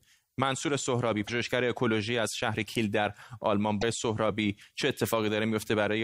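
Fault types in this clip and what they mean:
broken MP3 bit reservoir: brief disruptions in the speech at 1.27 s and 3.80 s, each about 30 ms, close to one 26.1 ms frame, likely from missing frames leaving the next frame reading wrong borrowed data. The waveform jumps discontinuously; the spectrogram shows a narrow break.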